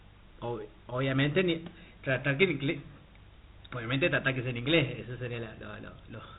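From start to finish the speech carries Dialogic VOX ADPCM damage: the sound was squeezed into 4-bit adaptive differential steps, which fits a 32 kbps OKI-style stream, and nothing survives above 3.8 kHz. The coarse steps leave a gritty hiss riding on each syllable, rising and falling with the speech, plainly audible. That level-tracking grit sets it apart from a simple low-pass filter, which would dull the sound without adding noise.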